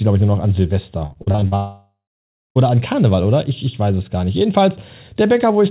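From 1.06 to 1.54 s, right after "ich nur noch an", repeated packet loss gives a robotic sound. Short gaps keep recurring, the longest about 45 ms. Each is patched by stretching the last sound. Nearly half the stretch is filled this way, so the speech turns choppy.

From 1.56 to 2.57 s, about a second of audio is gone. The last sound carries on as a fading buzz. Then comes roughly 0.6 s of silence before the speech returns. This is likely a long network dropout. The band stays capped at 4 kHz throughout, which fits a G.711 call codec.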